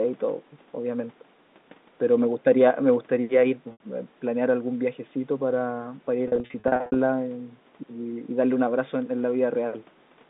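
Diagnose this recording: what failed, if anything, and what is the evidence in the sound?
Packet loss with pitch repetition at the network stage: a held, buzzy tone at 3.72–3.80 s and scattered repeats from 6.28–6.96 s, where the repeated pitch period fills each gap instead of silence.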